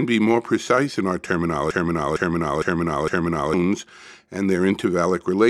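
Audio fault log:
1.71–3.54 s, broken-record loop: a fragment of about 458 ms plays four times in a row, each pass identical, so the sound stutters in place for close to two seconds before moving on. The likely cause is a player, encoder or stream that stalled and kept resending the last piece it held, and whatever should have filled that stretch is gone. On a waveform or spectrogram, the same block of shapes repeats at exact 458 ms intervals.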